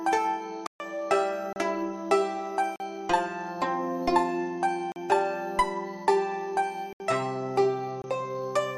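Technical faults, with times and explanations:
0.67–0.80 s, 1.53–1.56 s, 2.76–2.80 s, 4.92–4.96 s, 6.93–7.00 s and 8.02–8.04 s: blocks of digital silence, 22 to 134 ms long, where samples were replaced by zeros. The sound cuts hard to silence and back with no fade. That hard cut separates it from a fade or a masked gap. The 134 ms block is heard as a short hole.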